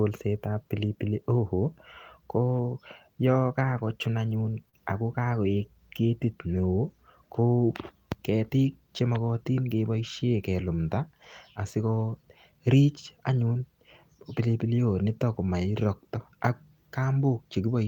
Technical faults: lost packet rebuilt from error correction; short concealed packet loss

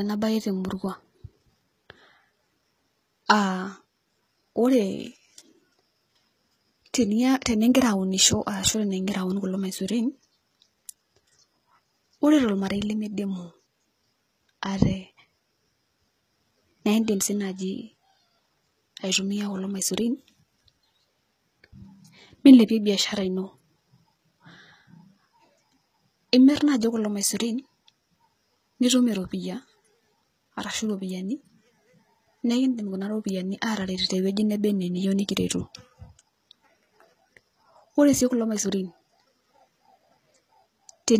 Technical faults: HE-AAC compression

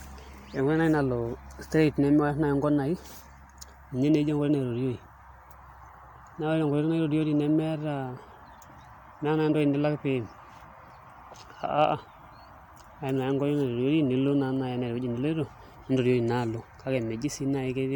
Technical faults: none

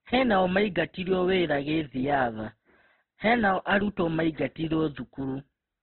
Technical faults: Opus compression

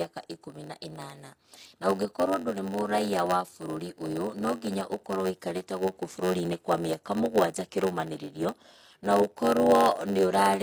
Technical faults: HE-AAC compression; block size mismatch (padded)

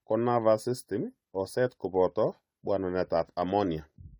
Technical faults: generation loss

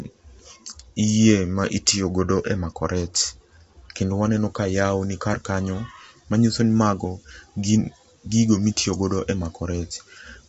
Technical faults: low-delay AAC compression

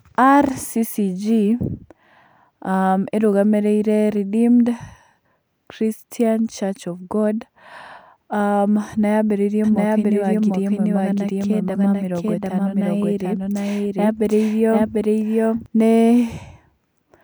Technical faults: doubled audio track

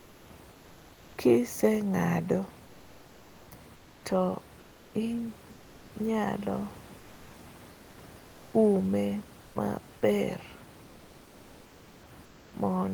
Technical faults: comfort noise in place of the background

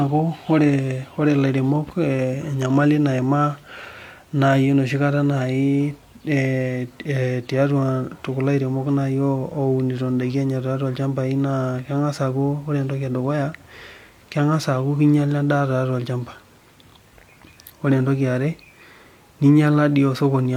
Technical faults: none

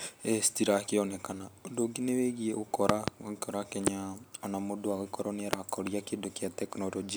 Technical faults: loud pop

